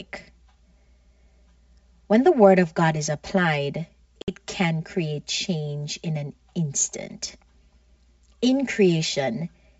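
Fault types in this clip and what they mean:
Channel delay (comb filtering): One side of the recording arrives around 5 ms behind the other, and once the two are folded to mono, anything they share cancels at regularly spaced frequencies, the lowest near 100 Hz with more stacked above it. The speech comes across hollow and a bit phasey the whole way through, as if heard down a tube, because those notches sit fixed in the spectrum and never move.
Packet loss on an ADPCM call: Between 4.22 and 4.32 s, right after "is applied", a hard-edged gap of about 60 ms opens up, which fits roughly three lost packets filled with silence. ADPCM depends on the decoder tracking the sender's prediction and step size, so when the stream picks up again at "can create change in" the decoder is briefly out of sync. The speech comes back with a little grit until it recovers, with the G.722 wideband coding carrying on cleanly around it.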